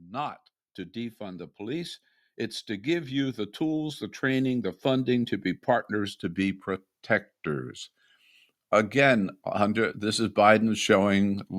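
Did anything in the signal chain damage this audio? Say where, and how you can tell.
Yes. The speech and its background swell up together from 0.16 to 6.66 s, by about 10 dB, then again from 8.7 to 11.45 s, by about 4 dB. This is automatic gain rising in call processing: the gain control judged the input too quiet and slowly raised it.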